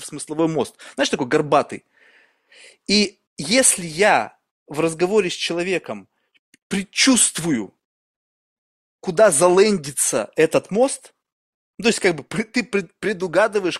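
At 0.39 s the level of the speech steps up by about 6 dB in a single instant and stays there to the end of the clip, a sudden gain jump. The likely cause is a digital gain setting applied without a ramp. What separates it from a talker leaning closer or an automatic gain control swelling is that the background noise rises by the same amount at the same moment, with no gradual transition and no later recovery.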